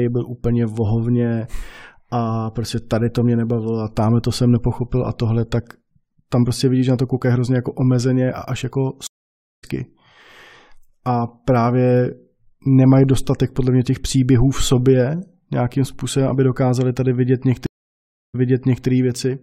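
At 9.07 s the speech drops out for about 0.56 s, a stream reconnect. The connection broke, the player went quiet, then reconnected and started a fresh decoder mid-stream, so when sound comes back around 9.65 s it's skipped ahead by roughly four tenths of a second. The same thing happens again at 17.66 s with a 0.68 s gap, but this time the server resent a burst, so playback resumes about 0.53 s earlier and you hear that bit repeated before it carries on to 18.87 s.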